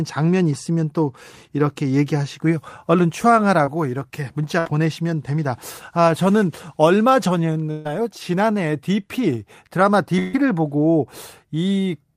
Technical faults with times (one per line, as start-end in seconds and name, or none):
3.65-3.69 short concealed packet loss
4.59-4.67 burst of packet loss
7.71-7.87 burst of packet loss
10.19-10.35 burst of packet loss